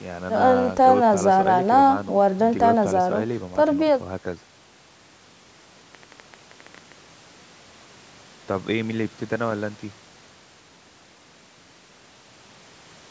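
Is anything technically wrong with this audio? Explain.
Yes. From 5.95 to 6.93 s, likely interference or a faulty connection injects a train of clicks: about ten similar pulses at an irregular 10.3 per second, popping a few decibels above the speech.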